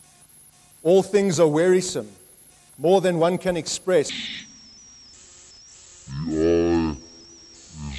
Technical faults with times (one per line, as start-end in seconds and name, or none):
4.09-7.99 wrong sample rate